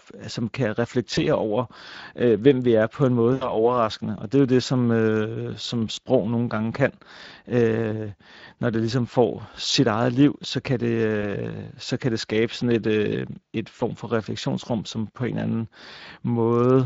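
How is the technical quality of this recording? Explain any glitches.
The quality is compromised: Speex codec damage runs through the whole recording, and five short VoIP packet loss dropouts are concealed by the speech codec.

The Speex codec leaves the speech hoarse and grainy, with a noisy edge. This fits a bitrate around 20 kbps, too few bits for a clean excitation signal. Because the texture is constant rather than arriving in bursts, it is codec coding damage, not network loss.

The packet loss concealment occurs at 1.15–1.25 s (after "som kan", before "over øh hvem vi"), 3.33–3.60 s (after "er på en måde"), 5.95–5.98 s (after "det som øh som", before "nogle gange kan"), 11.21–11.24 s and 13.77–13.81 s. Each time, the decoder stretches its last pitch and filter into a brief, fading sound instead of going silent. Most events fit one lost 20 ms frame, while the 3.3 s event fits about 80 ms lost. 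Unlike a hard dropout, the sound smears and stays weak briefly after recovery.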